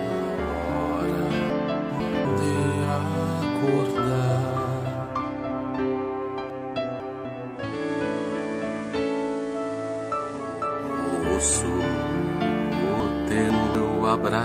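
Chunks out of order at 1.5 to 2.25 s, 6.5 to 7.25 s and 13.0 to 13.75 s: each time a 250 ms chunk played two chunks late, so nothing is lost but the sequence scrambles, leaving a jumbled moment with three hard joins. From 7.51 to 10.76 s, digital radio blending to analogue occurs: the receiver lost the digital stream and cross-faded over about 0.4 s to the FM broadcast, where level drops about 3 dB and hiss rises roughly 25 dB below the signal.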